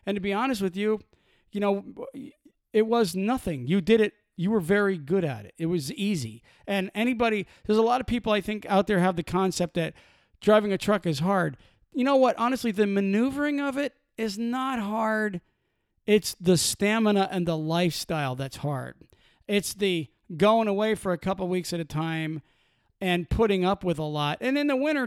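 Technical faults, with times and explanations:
Nothing stood out as a technical problem on listening to this speech recording.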